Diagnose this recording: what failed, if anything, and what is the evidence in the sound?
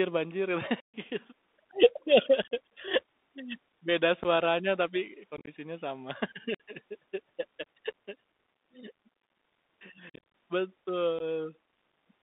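The codec stage failed: a Bluetooth CVSD headset codec confines the speech to about 200 Hz to 3.7 kHz. The spectrogram shows a hard ceiling there, plus granular hiss and scratchy s sounds from the slope-limited delta steps.

The Bluetooth link stage dropped packets, and the loss went unconcealed. The waveform shows abrupt flat gaps at 0.80–0.94, 2.42–2.51, 4.23–4.26, 5.37–5.49, 6.54–6.60, 10.10–10.20 and 11.19–11.21 s. The longest run lasts about 135 ms.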